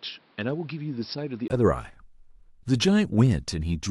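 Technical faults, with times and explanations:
0.0–1.5 s, input switched to a poorer device: the speech is dull, quieter and carries faint background noise, with nothing above 5.5 kHz, then a 20 ms gap; likely a narrower-band microphone.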